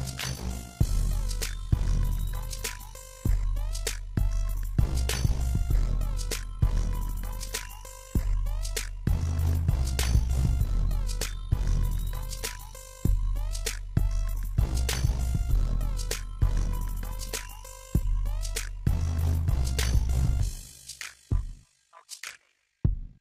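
Overlap-add ripple runs through the whole clip: the audio was split into windowed frames and rejoined with an overlap whose gains do not sum evenly, so the level dips by about 11 dB once per frame, around 50 times a second, giving a rough, buzzy flutter.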